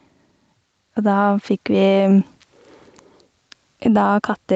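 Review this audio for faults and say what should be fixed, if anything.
Gain pumping runs through the whole clip: the background swells between phrases and dips roughly 5 dB under each loud syllable, likely from mic gain set too high feeding a fast limiter. Turning the input gain down so the limiter rarely kicks in would stop it.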